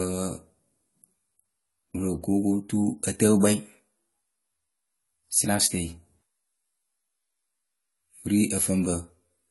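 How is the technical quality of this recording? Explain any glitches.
The recording has plainly audible lossy-coding damage from start to finish. The likely cause is AAC compression: an AAC-LC encoder, starved of bits at a rate that fits roughly 32 kbps, threw away fine spectral detail and removed everything above 11.5 kHz. Throughout the speech, this leaves consonants dull and smeared, with a watery, fizzy texture on sibilants.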